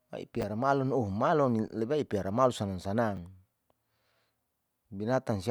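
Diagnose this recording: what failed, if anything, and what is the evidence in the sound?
Chunks out of order at the buffer stage, 0.41–0.43 s and 3.16–3.18 s. A 10 ms chunk plays one slot late. Brief jumble.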